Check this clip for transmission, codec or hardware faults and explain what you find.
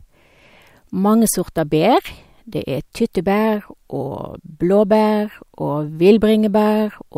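One fault runs through nearly the whole clip. From 0.16 s to 7.08 s there are clock slip clicks, faint ticks at a steady pace of roughly every 0.15 s, about fifty in all. The likely cause is two unsynchronised clocks drifting about 150 ppm apart, forcing a single-sample drop or repeat each time. On a spectrogram they appear as evenly spaced thin vertical lines during the speech, and on the waveform as tiny step discontinuities.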